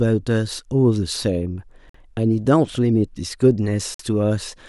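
Speech delivered in 2-second chunks with a gap between chunks: the audio stops for 50 ms at each join, at 1.89 s and again at 3.94 s, leaving short holes that interrupt the sound without dropping any of it.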